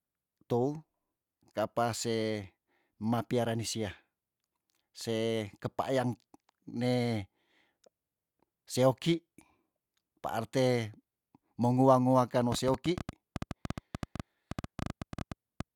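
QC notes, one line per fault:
12.52–15.61 s, train of clicks: something is injecting short impulses into the signal path, likely electrical interference from nearby equipment or a faulty connection or power supply. The result is around thirty near-identical clicks at roughly 9.7 per second, spaced unevenly, so they sound like an erratic ticking laid over the speech and the pauses between phrases. Their peaks stand about 10 dB above the speech, which makes them plainly audible.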